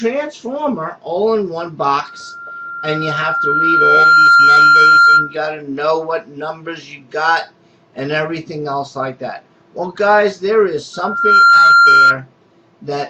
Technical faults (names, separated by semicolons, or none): loudspeaker feedback squeal